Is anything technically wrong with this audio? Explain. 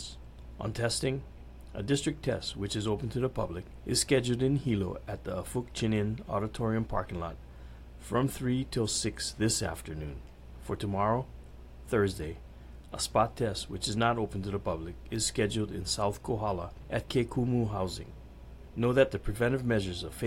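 No, nothing technically wrong can be heard anywhere in this audio.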